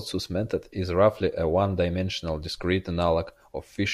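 No technical faults can be heard anywhere in the recording. The speech runs from beginning to end without any interruption or disturbance.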